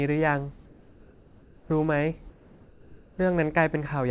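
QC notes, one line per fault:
0.66–1.70 s and 2.30–3.18 s, comfort noise in place of the background: in both pauses the real background, about 25 to 27 dB below the loud passages, becomes a steady, featureless hiss about 2 dB quieter, likely because transmission stopped during silence and the receiver synthesised filler noise.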